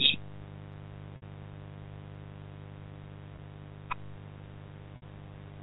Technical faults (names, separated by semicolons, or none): mains buzz; packet loss with pitch repetition